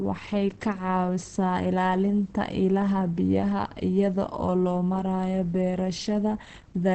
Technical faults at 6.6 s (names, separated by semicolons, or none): Opus compression